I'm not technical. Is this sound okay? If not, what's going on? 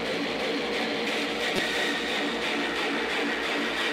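No. At 1.56 to 1.59 seconds there is a corrupt frame decoded, a short chirp or burst of noise. A couple of damaged chunks of the compressed audio were played anyway, so sound lands at wrong pitches. A dropout would leave silence instead.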